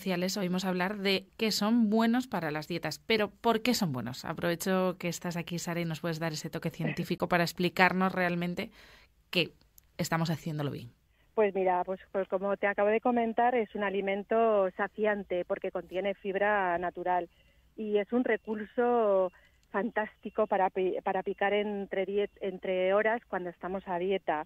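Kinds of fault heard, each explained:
AAC frame loss with muting: the decoder zeroes a missing frame's spectrum, so around 7.18 to 7.20 s a brief, soft-faded dip of about 21 ms appears, which fits a single lost frame.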